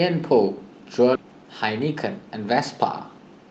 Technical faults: skip ahead; jitter buffer speed-up

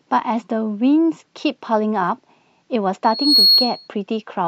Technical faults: loudspeaker feedback squeal

